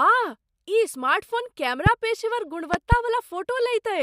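At 1.86 to 1.89 s, just after "ई स्मार्टफोन", a loud pop sounds as a single sharp crack well above the speech, which carries on underneath. Between 2.74 and 2.95 s two more pops follow in quick succession, even louder. These are likely sudden voltage pulses, such as static or a switch or driver glitch, summed into the signal. The waveform shows tall narrow spikes standing out from the speech, and the spectrogram shows thin vertical broadband stripes.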